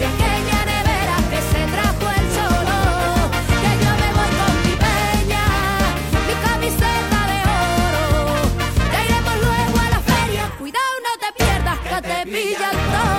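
No technical faults are audible anywhere in this audio.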